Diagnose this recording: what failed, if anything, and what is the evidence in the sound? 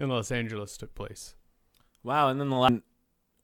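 A CD skip at 2.68 s in this speech, a playback-stage fault: a tick and a very brief mute of a couple of milliseconds, then the sound resumes from a different point. A knock or disc flaw made the laser jump to another turn of the spiral.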